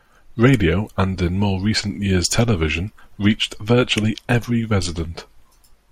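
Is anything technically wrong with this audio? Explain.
No, nothing technically wrong can be heard in this speech recording. No technical fault turns up anywhere in the audio.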